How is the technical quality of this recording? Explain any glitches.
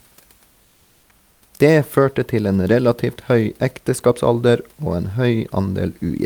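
One brief glitch occurs against a room noise floor sitting about 41 dB below the speech. From 1.31 to 1.41 s, roughly 100 ms, comfort noise replaces the background. The sender likely stopped transmitting during the pause under discontinuous transmission, so the receiver generated synthetic noise to fill it. The real room hiss becomes a flat, featureless wash, only about 1 dB quieter. On a spectrogram, the textured background briefly turns into a smooth, uniform band. The waveform stays at the same low amplitude but loses its fine irregularity.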